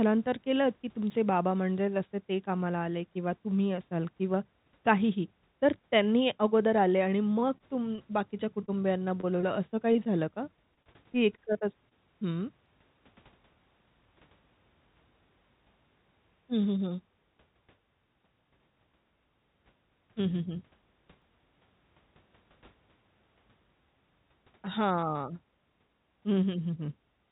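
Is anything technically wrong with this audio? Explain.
Yes. Three kinds of fault can be heard in this speech, which arrives over a call path whose band stops at 4 kHz, consistent with G.711 mu-law at 64 kbps.

At 1.1 s, 12.66 s and 21.22 s there is an abrupt jump forward in the speech and no silence, losing a few hundredths of a second each time. The likely cause is a dropped buffer (overrun): the hardware overwrote samples before the program collected them, so the two sides are spliced together.

From 7.34 to 8.00 s, 8.66 to 9.45 s and 10.75 to 11.93 s the voice turns choppy. This is repeated packet loss, producing a robotic sound. Four, four and then nine gaps, each up to about 24 ms, were patched by extending the preceding sound. The longest stretch had around 14% of its length concealed this way.

Between 9.93 and 9.97 s a brief smear or wobble interrupts the speech. This is short concealed packet loss. 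About 20 ms of audio never reached the decoder in time, so the receiver filled the hole by continuing the last sound for roughly 21 ms and then blended back into the real signal.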